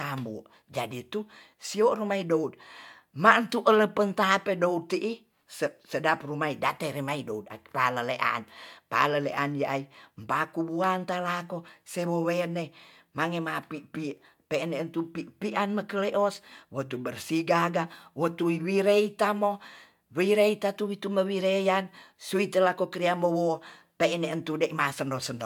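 Nothing in this recording stands out as a technical fault, so there's no problem here to walk through.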